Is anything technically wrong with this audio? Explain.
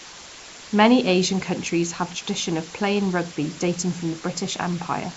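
Yes, two faults run through the entire speech clip.

Low bit depth with dither: the signal has been reduced to very few bits, consistent with about 6, with dither added before rounding. Because the dither turns the rounding error into random noise rather than distortion tied to the signal, the result is a steady, even hiss lying only around 15 dB below the speech. It stays constant through pauses and syllables alike, masking quiet detail without any gritty or buzzy distortion.

Nellymoser compression: this is likely the cause of the second fault, a Flash-era codec that works on short blocks with a fixed small bit budget, which fits a 32 kbps stream here. Bands too weak to earn bits are replaced with synthetic noise, so the speech carries a rough, hissy halo and a smeared, underwater quality, and the damage is plainly audible. The band is also cut off, with nothing above 7.7 kHz.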